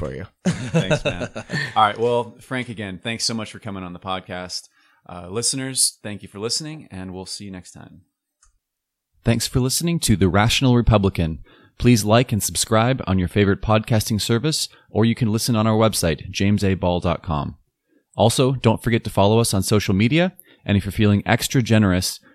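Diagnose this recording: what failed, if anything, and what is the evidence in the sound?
Nothing failed: no stage of the chain, from capture through storage to playback, leaves an audible mark anywhere in the speech.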